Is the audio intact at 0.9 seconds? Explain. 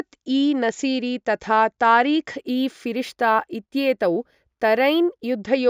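Yes, at 0.9 seconds the speech plays through intact, with no dropout, click, distortion or other fault at that moment.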